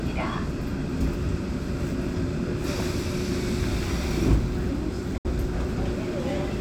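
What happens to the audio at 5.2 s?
From 5.18 to 5.25 s the sound abruptly goes silent, likely a Bluetooth dropout. It resumes further on, skipping material rather than pausing and picking up where it stopped.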